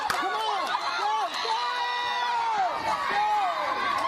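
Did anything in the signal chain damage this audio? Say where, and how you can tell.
No, nothing along the signal chain has left an audible mark, and the signal holds steady throughout with no dropouts, discontinuities or other stage-specific damage to point to.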